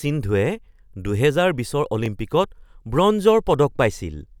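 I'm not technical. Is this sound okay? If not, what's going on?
No, there's one glitch. At about 2.06 s the speech drops out for well under a millisecond, a block of digital silence where a tiny chunk of audio went missing, likely because the program didn't deliver it in time. The abrupt cut and return make a quick tick.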